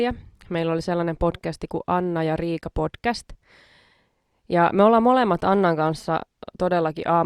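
GSM signalling bursts, 5.39 to 6.03 s: a nearby 2G phone's radio bursts are rectified, giving galloping ticks and faint 217 Hz buzzes under the speech.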